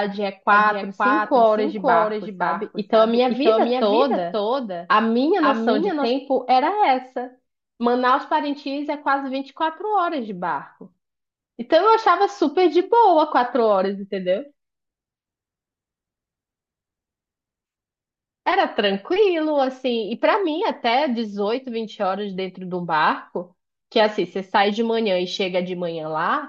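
From 0.53 to 6.1 s there's a doubled audio track: a second copy trails about half a second behind, roughly 5 dB down, likely from a slower capture path.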